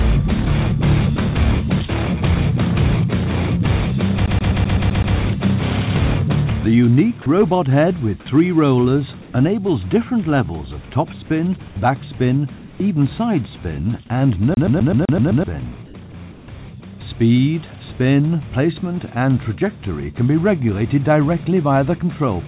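From 4.26 to 5.15 s a tiny slice of sound, about 0.13 s long, repeats seven times in a rapid, even stutter, each pass ending in a short mute. This is a CD stuck on one turn. A scratch keeps throwing the laser back one track at the same point of each rotation, so the same fragment replays until the player breaks free. The identical stutter returns from 14.54 to 15.44 s, again seven repeats of the 0.13 s loop.

At 7.22 to 7.26 s the sound briefly gives way to flat noise for about 40 ms. The same thing happens at 11.68 to 11.76 s for about 80 ms and at 12.18 to 12.20 s for about 20 ms. Each time, some 20 to 30 ms of real sound goes missing. This is sound dropped by the voice detector. The sender's detector likely mistook quiet material for background and stopped transmitting, so the receiver filled the gap with synthetic noise until transmission resumed.

At 9.22 to 9.34 s and 12.58 to 12.80 s the background, which sits about 22 dB below the loud parts, turns into a smooth, featureless hiss roughly 3 dB quieter. 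The same happens at 15.86 to 15.94 s, with the background about 23 dB down and a drop of about 3 dB, and at 16.32 to 16.48 s, with the background about 24 dB down and a drop of about 5 dB. This is comfort noise in place of the background. The likely cause is discontinuous transmission: the sender paused, and the receiver generated generic noise instead of the real ambience. That substitute noise, like everything else here, is band-limited at 4 kHz by the G.711 mu-law call path.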